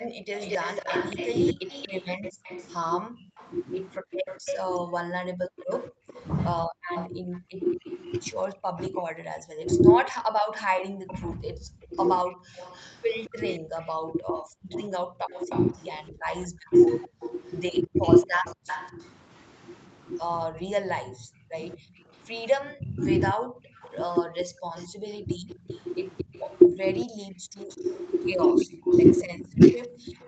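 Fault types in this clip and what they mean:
Echo leak: A faint, delayed copy of the speech trails the talker throughout, about 20 dB below it and roughly 227 ms late. The likely cause is a far-end echo canceller that let part of its loudspeaker pickup back into the call.
Background gated by the echo canceller: The room sound briefly dips or vanishes, by up to about 31 to 37 dB, in short moments within 0.08–3.37, 8.53–10.94, 17.08–18.66 and 23.39–24.94 s. The canceller clamped the microphone while its loudspeaker played, then released it.
Speech suppressed in double talk: From 1.53 to 30.16 s the talker's voice repeatedly sinks, dulls or breaks up, sometimes by around 40 dB, about seven seconds in total. Both sides likely spoke at once, so the canceller muted the talker along with the echo.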